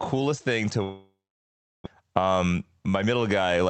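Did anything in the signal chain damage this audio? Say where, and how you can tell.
Yes. Right after "thing to", at 0.83 s, the audio gives way to a fading buzzy smear from the jitter buffer's concealment, which then settles into near-silence for about 0.7 s before sound resumes at 1.88 s. That's most likely a long network dropout: packets stopped arriving, the receiver stretched the last sound, then gave up. About 0.6 s of material never comes back, and the timing shifts by a few hundred milliseconds afterwards.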